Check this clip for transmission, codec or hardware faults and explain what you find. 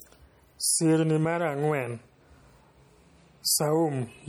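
One fault runs through the whole recording: plainly audible MP3 compression, likely the cause of the damage heard. The encoder splits the signal into narrow frequency lines and gives bits only where its hearing model expects them to count. At a starved rate, which fits a low bitrate near 48 kbps, weak lines drop in and out from frame to frame. The speech turns watery and swirly, and s sounds pick up metallic chirps, even though content still reaches about 21.1 kHz.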